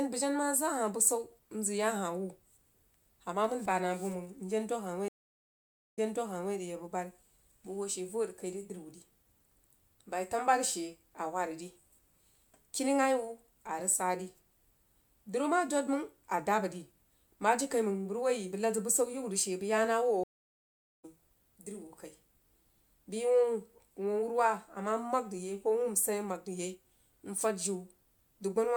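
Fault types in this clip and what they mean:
stream reconnect: The connection dropped twice, and each time the player fell silent, reconnected and started a new decoder partway through the stream. At 5.08 s the sound cuts out for 0.89 s and comes back 0.58 s earlier than where it stopped, so a short stretch of speech is heard again. At 20.24 s a 0.8 s gap is followed by a jump of roughly 0.7 s forward, so that stretch of speech is lost.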